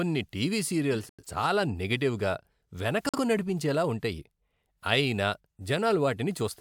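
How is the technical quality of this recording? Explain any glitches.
The recording has two dropouts, both from corrupt frames being muted.

From 0.94 to 1.25 s the sound cuts abruptly to silence for about 0.3 s, ending just before "చాలా నెగటివ్గా". A shorter hole, about 0.09 s, runs from 3.09 to 3.18 s, just before "నడిపించేలా ఉంటాయి". Damaged compressed frames were rejected by the decoder and replaced with silence, so timing stays intact. The first gap's length points to a run of several frames, the second to roughly one.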